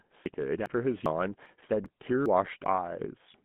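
GSM full-rate codec damage runs through the whole recording. The speech has been squeezed to 13 kbps by a coder that models the vocal tract and rebuilds it from a sparse train of regularly spaced pulses, so voiced sounds take on a plainly audible buzzy, gravelly roughness. The line band sits at 150 Hz to 3.5 kHz, and nothing survives above 3.8 kHz, leaving sibilants dull and the whole sound narrow and telephone-like.

Audio missing between chunks is heard as seven abrupt skips at 0.26, 0.66, 1.06, 1.46, 1.86, 2.26 and 2.66 s, one every 0.4 s. At each, about a tenth of a second of speech vanishes and the surrounding audio is butted together with no gap. The likely cause is a recorder working in 0.5 s chunks that drops a slice at every handover, so the regular spacing gives the speech a clipped, lurching rhythm.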